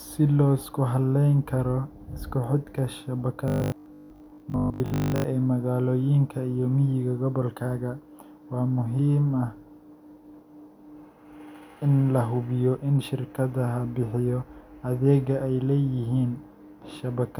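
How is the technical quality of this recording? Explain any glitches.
The recording has one glitch. From 3.48 to 5.24 s the speech takes on a robotic sound, most likely from repeated short buffers: audio arrives too seldom, so a fragment of roughly 20 ms is replayed while most of the real signal is skipped. Those repeats impose a rigid, metallic 50 Hz buzz that still loosely tracks the speech, which sets it apart from steady mains hum.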